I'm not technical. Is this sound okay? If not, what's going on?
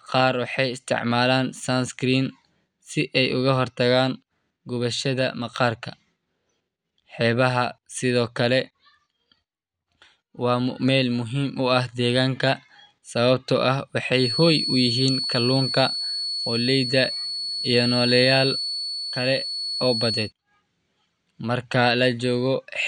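No. From 14.09 to 20.33 s a thin, slowly swelling and fading feedback whistle near 4.4 kHz sits just under the speech, likely from the loudspeaker leaking back into the microphone.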